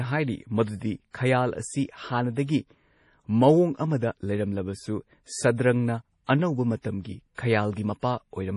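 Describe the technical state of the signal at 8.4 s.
At 8.4 s the speech carries likely MP3 compression, present throughout: nothing above 11.3 kHz, with watery, swirling detail consistent with a starved bitrate near 32 kbps.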